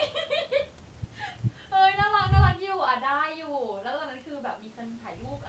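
A speech recording with no technical faults: it has passed through a call's microphone processing, which trims the lowest bass and leaves no content above 8 kHz, as is normal for that path.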